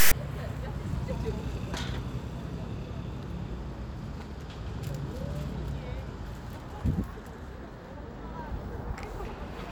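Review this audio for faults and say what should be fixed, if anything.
At 0.0 to 0.12 s a loud, hard-edged rasp of static opens the clip: file tags played as audio. Text metadata is decoded as samples, so the waveform shows a dense block offset to one side and the spectrogram a broadband vertical slab. Fix the decoder or parser so it skips the tag block and reads samples only from the actual audio data.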